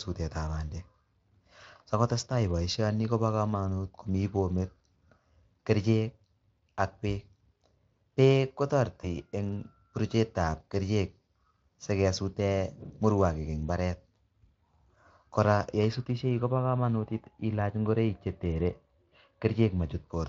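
Around 9.01 to 9.08 s there's a brief patch of VoIP packet loss concealed by the speech codec: a single frame, about 20 ms of audio, went missing. The decoder extrapolates from its previous pitch and filter state at a reduced gain, so you hear a short smeared stretch that fades. Because each frame leans on the one before, the speech stays soft until about 9.08 s. The Speex coding itself, at around 24 kbps, carries light coding damage.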